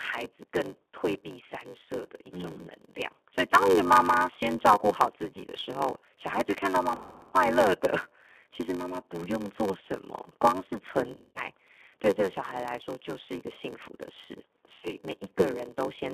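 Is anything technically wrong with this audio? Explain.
Yes, there are three faults. Throughout the clip, G.729 codec damage is plainly audible. The speech is confined to roughly 300 Hz–3.5 kHz and rebuilt from a vocal tract filter and a few pulses per frame, which makes it rough and synthetic, consistent with an 8 kbit/s stream.

A padded block size mismatch is also present throughout. Each block is read at a larger size than was written, and the shortfall is filled with zeros, which fits a 512-sample read buffer. The periodic gaps produce a buzz at about 94 Hz and slow the audio to about 0.86×.

VoIP packet loss concealed by the speech codec occurs at 6.95–7.35 s (about 320 ms lost), 11.14–11.48 s (180 ms) and 14.73–14.94 s (80 ms). The decoder extrapolates from its last pitch and filter, so speech smears into a fading buzzy tone or coloured noise and stays weak briefly afterward.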